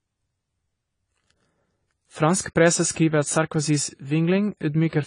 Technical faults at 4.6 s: AAC compression

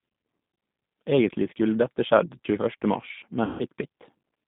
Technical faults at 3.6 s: G.729 codec; VoIP packet loss concealed by the speech codec

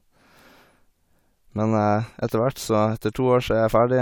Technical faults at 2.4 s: none

